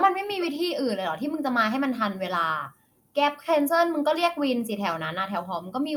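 Speech, with no technical fault audible anywhere in the recording. Nothing in the audio points to a problem in how it was captured, processed or delivered.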